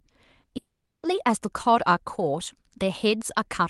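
Speech over a call path shows two faults. Around 0.41 to 0.45 s and again from 0.45 to 0.49 s the sound briefly smears and wobbles, two back-to-back glitches of about 40 ms each. This is short concealed packet loss: roughly 20 ms of audio in each stretch never reached the decoder in time, so the receiver extended the preceding sound to bridge the gap and then blended back into the real signal. From 0.57 to 1.05 s the sound carries on as a fading buzz or hiss and then drops to near silence for about 0.38 s before speech resumes, with the lost portion simply absent. This is likely a long network dropout. Nothing arrived for around 460 ms, and the receiver's concealment could only stretch the last sound briefly before giving way to silence. Throughout, the audio has the coding character of a call codec, with content above about 12 kHz removed, which fits Opus in its 12 kHz bandwidth mode.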